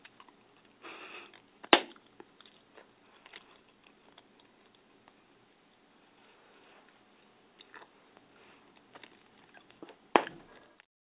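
No technical faults can be heard in the audio, which has come through a call path whose narrowband coding leaves nothing above 4 kHz, consistent with G.711 mu-law at 64 kbps.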